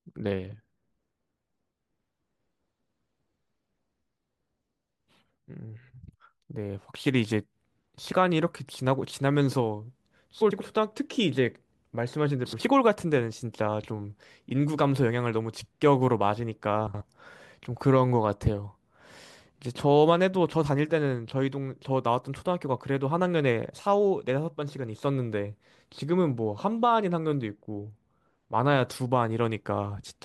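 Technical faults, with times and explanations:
10.40–10.61 s, 12.45–12.61 s and 16.87–17.02 s: frames out of order. Two neighbouring blocks, 93 ms each in the first case and 70 ms in the others, were decoded swapped. This gives a brief garbled flutter. No time is lost.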